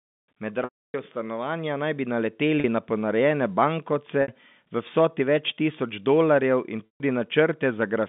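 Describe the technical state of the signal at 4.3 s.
At 4.3 s the signal is just coming out of a packet loss with pitch repetition that runs from 4.22 to 4.28 s. About 60 ms of audio went missing, which fits three 20 ms packets. The receiver bridged the gap by looping the last pitch period and fading it down over roughly 50 ms, so the sound briefly holds as a buzzy, sustained tone, thins toward silence, then cross-fades back into the narrowband G.711 telephone audio.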